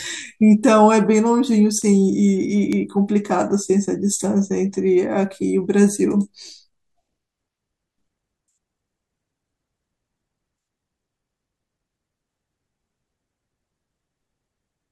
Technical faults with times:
1.82 bit error spike
2.73 bit error spike

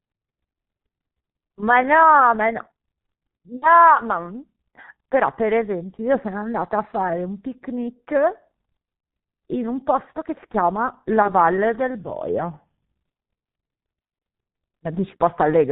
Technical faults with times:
0.00-15.71 G.723.1 codec
3.56-3.65 VoIP packet loss concealed by the speech codec
6.25-7.10 drift correction step
9.00-9.03 VoIP packet loss concealed by the speech codec
11.22-11.32 VoIP packet loss concealed by the speech codec
11.99-12.89 drift correction step
14.19-14.22 VoIP packet loss concealed by the speech codec

